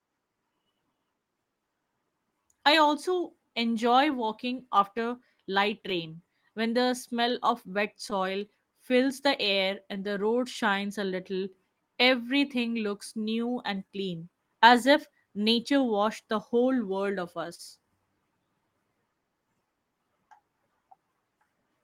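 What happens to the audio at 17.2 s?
Around 17.2 s, three problems overlap.

The sender's audio clock is running about 2 percent slower than the receiver's, a clock drift between sender and receiver that lasts the whole clip. Because the slower sender delivers audio a little late against the receiver's own timing, the jitter buffer keeps drifting toward empty. At this moment the speech carries the same faint unsteadiness in timing heard throughout, rather than a single obvious event.

To stay in step with that slower clock, the receiver is making repeated timing corrections from 0.33 s to 21.82 s, stretching the speech by repeating short slices. The playback effectively runs at 98 percent speed and adds roughly 300 ms over the span. Each repeat is tiny and unevenly placed, so near 17.2 s, if heard at all, it comes across as a slight drag or hiccup in the rhythm.

On top of this, scattered short gaps fall between 16.64 s and 17.62 s. 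A few packets, roughly three, were lost or late, and the receiver filled each hole, about 40 ms at most, by extending the last sound it had. Only a small share of that second is patched, so the speech stays clear but picks up brief smears or ticks where the fills land.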